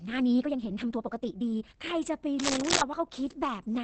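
Throughout, the speech sounds muffled and hoarse, with nothing above 8.6 kHz. This is likely Opus compression in its speech mode, at a rate near 16 kbps.

From 0.0 to 1.76 s comes a time-stretched section. The speech runs about 1.69 times too fast at unchanged pitch. It likely comes from dropped pieces, so it sounds rushed.

From 2.39 to 2.82 s, cable scratch noise intrudes. Dense, uneven rustling rises a little above the speech, likely from a worn contact shifting.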